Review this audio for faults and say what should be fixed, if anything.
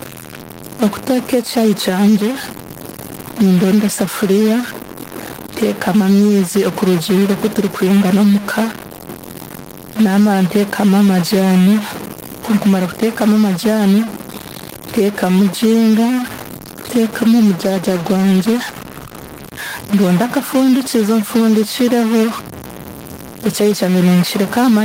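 A distortion runs through the whole clip, and the pauses between phrases are filled with a gritty noise floor rather than silence. The likely cause is a stuck bit, where one data line or converter output is fixed at 0 or 1, so about half the samples are offset by that bit's weight. Clipping or overdrive distorts only the loud peaks, but this fault also fills the quiet gaps with noise that follows the sign of small values. Checking the converter, cabling and digital interface, and replacing whichever part has a dead bit, would prevent it.

Throughout the recording, the gain is pulled down on loud syllables. The swing is around 5 dB, and loud and soft passages sit unnaturally close in level. This points to gain pumping: input gain set too high for the microphone, with a fast limiter or compressor pulling it back on every peak. A noise gate would cut the gaps down rather than squash loud and soft parts together. 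Lowering the input gain and easing the limiter's attack and release would prevent it.

From 17.62 s to 19.57 s, just before "ndonde akafundikizo", the speech turns rough and watery and loses its high-frequency detail. It is at its worst for about 1.9 s and then recovers. This is a call bitrate drop: the bandwidth estimate fell and the encoder was told to spend far fewer bits, coding coarsely and trimming the top end. The change fits a fall from about 32 to 15 kbps. A damaged microphone or a bad filter would muffle the sound for the whole clip, but here the change has a clear start and recovery. Providing more stable network bandwidth, or setting a higher minimum encoder bitrate, would prevent it.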